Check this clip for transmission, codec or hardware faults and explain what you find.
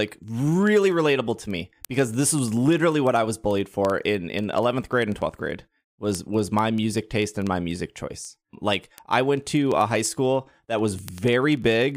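There is one fault: word clock ticks running from 0.14 s to the end of the speech. A device reading a digital link on its own unsynchronised clock drifts against the sender by roughly 400 ppm, so every time the clocks slip past each other a single sample is dropped or repeated. The result is a steady train of sharp ticks of uneven strength about every 50 ms, around two hundred across the clip.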